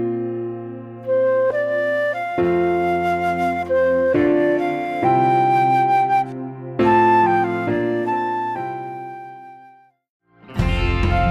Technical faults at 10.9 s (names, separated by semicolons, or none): none